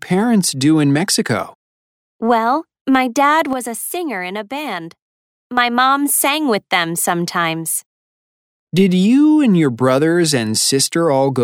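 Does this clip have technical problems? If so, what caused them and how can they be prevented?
Yes. There is a sudden gain jump from 3.53 s to 5.57 s. The level drops by about 7 dB and the background noise drops with it. The likely cause is a digital gain change applied between two samples without a ramp. Applying gain changes through a short fade prevents this.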